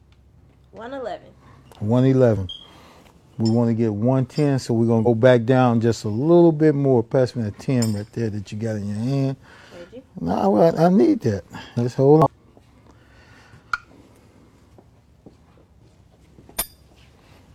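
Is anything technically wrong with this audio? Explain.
Yes. There is damaged data in a compressed stream at three points: 2.33–2.38 s, 5.02–5.07 s and 12.22–12.27 s. Each time, corrupted bytes make the decoder misread the affected frames and lose sync until it finds a valid frame header again. Each event is a brief chirp, squawk, click or short hole, roughly 50 ms long. On a spectrogram each shows as a narrow vertical disturbance, and on the waveform as a short burst or gap that breaks the surrounding shape.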